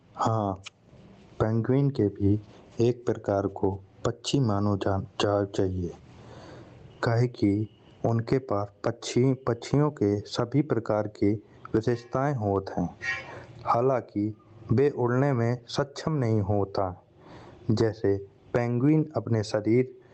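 Gain pumping runs through the whole speech clip: the gain swings by around 25 dB, pulling loud and soft parts closer in level and squashing the sound, likely from excessive gain hitting a fast limiter. On the waveform the envelope looks flattened. The call path's Opus coding, audible as a cut-off near 8 kHz, sits under this.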